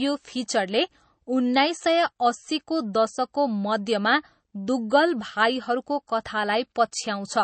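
From start to finish the speech shows plainly audible MP3 compression damage. Nothing sounds above about 8.3 kHz, and weak frequency detail flickers in and out between frames. That gives a watery, swirly texture with metallic chirps on s sounds. The likely cause is a low bitrate, around 32 kbps.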